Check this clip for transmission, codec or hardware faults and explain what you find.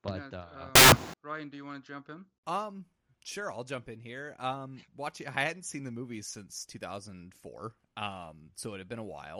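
One fault is present: a burst of samples built from the wrong bytes, running from 0.75 s to 1.14 s in this speech clip. For those 0.38 s the reader misassembles each sample, so the rapidly fluctuating low-order bits land in the most significant position. The result is loud, harsh broadband noise. A spectrogram shows a flat, full-band wash across that span, and the waveform turns dense and structureless.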